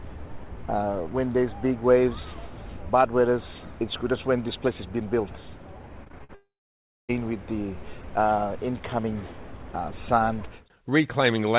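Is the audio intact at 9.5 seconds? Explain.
Yes, the audio is intact at 9.5 seconds, carrying only the usual character of the G.711 A-law call path, with nothing above 4 kHz.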